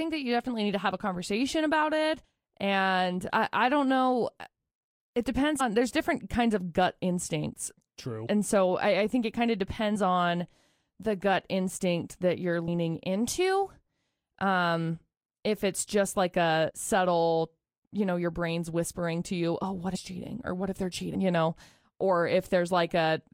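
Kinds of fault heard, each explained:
Compressed frames skipped: the speech jumps ahead seven times, losing roughly 30 to 200 ms each, as whole compressed frames were missing or refused by the decoder.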